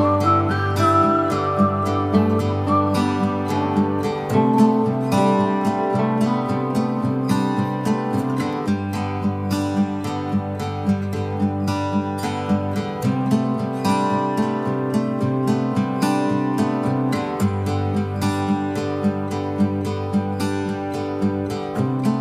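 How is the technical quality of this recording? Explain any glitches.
No glitches or technical faults can be heard anywhere.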